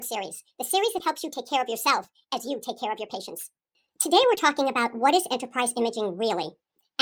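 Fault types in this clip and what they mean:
Wrong sample rate: the whole speech clip plays about 1.38 times too fast and about 5.55 semitones too high, so voices sound raised and hurried from start to finish. Speed and pitch move together by the same ratio, which fits audio recorded at 32 kHz being played at 44.1 kHz without conversion. That coupling tells it apart from a pitch shift, where only the pitch changes, or a time stretch, where only the speed changes.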